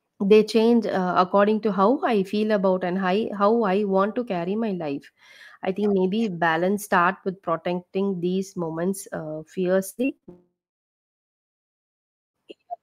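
Just after "protecting these moments uh", from 9.89 to 10.29 s, repeated packet loss strikes: audio packets keep going missing, and each hole is patched by stretching the preceding sound. Over half that span is patched in, with gaps up to 87 ms, so the speech turns choppy and robotic.

From 10.29 to 12.36 s, the likely cause is a long network dropout, with no audio arriving at all. The last sound is briefly carried on as a fading buzz or hiss, then about 1.8 s of silence follows before the audio resumes with that stretch missing.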